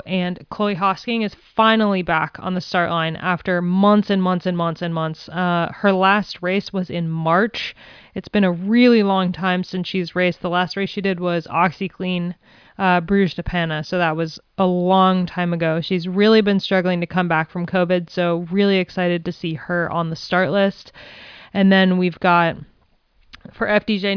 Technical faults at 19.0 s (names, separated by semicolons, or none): none